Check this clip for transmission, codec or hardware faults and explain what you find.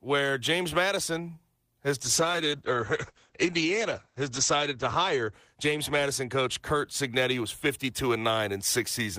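One fault is present, a call bitrate drop. From 2.03 s to 7.63 s the speech turns rough and watery and loses its top end, sounding duller and more smeared for about 2.5 s at its worst before clearing. The call's bandwidth estimate fell, so the encoder coded far more coarsely and narrowed its audio bandwidth from 20 kHz to 8 kHz. The degradation fits a fall from about 32 kbps to around 10 kbps.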